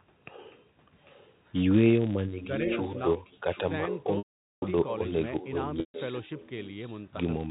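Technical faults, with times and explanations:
Throughout: filter restarted on every block. A steady buzz at about 188 Hz runs under the whole clip, which fits a 256-sample block at a 48 kHz rate. A filter in the chain loses its memory at each block boundary and starts again from silence, so every block opens with a small transient. These clicks repeat at the block rate and fuse into a buzz that swells and shrinks with the speech level, rather than sitting at a fixed loudness.
0.45 to 0.57 s, 1.05 to 1.33 s and 2.41 to 7.07 s: echo leak. A copy of the speech returns 796 ms late. In the first two stretches it is faint, about 35 dB under the direct sound. From 2.41 s onward it rises to about 10 dB down. The likely cause is an echo canceller on the far end that failed to remove what its microphone caught from a loudspeaker. That residue was sent back down the line.
4.18 to 4.62 s and 5.80 to 5.94 s: packet loss with pitch repetition. 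Audio was missing for 440 ms and then 140 ms. To cover each gap, the receiver repeated the last pitch period, which is heard as a briefly held, buzzy tone. Over roughly 50 ms that tone fades away. Both gaps outlast the fade, so each drops to silence before the speech comes back through a short cross-fade. The 440 ms gap has the longer dead stretch.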